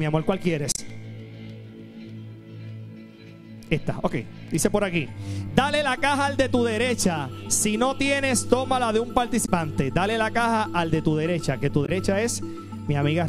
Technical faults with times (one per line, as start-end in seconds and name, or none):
0.72-0.79 damaged data in a compressed stream
9.42-9.49 damaged data in a compressed stream
11.82-11.89 damaged data in a compressed stream